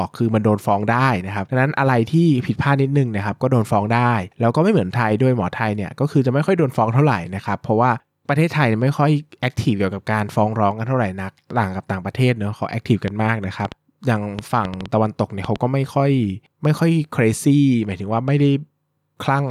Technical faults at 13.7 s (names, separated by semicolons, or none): train of clicks